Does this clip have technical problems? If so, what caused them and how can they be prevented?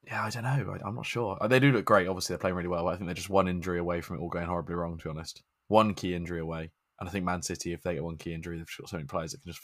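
No, the speech signal shows no technical faults anywhere in the recording, so there is nothing to prevent.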